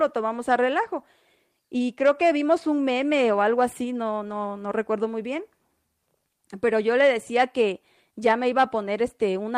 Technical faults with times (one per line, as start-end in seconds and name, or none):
none